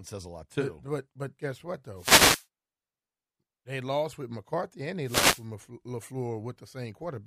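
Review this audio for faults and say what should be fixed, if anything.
Wireless microphone noise hits at 1.96 to 2.46 s, just after "but but guess what", and at 5.02 to 5.46 s: short bursts of hissing static as the FM radio link fades and receiver noise swells over the speech. To prevent it, use diversity receivers with well-placed antennas and keep a clear line of sight.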